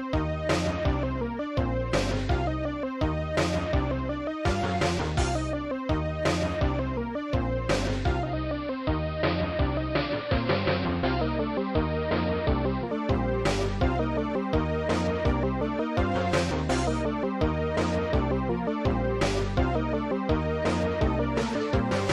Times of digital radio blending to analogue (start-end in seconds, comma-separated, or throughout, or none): 8.19-12.96